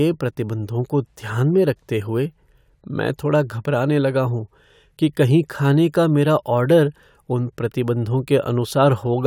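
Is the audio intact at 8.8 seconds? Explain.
Yes, the speech at 8.8 seconds is intact, with no dropout, click or distortion at that moment.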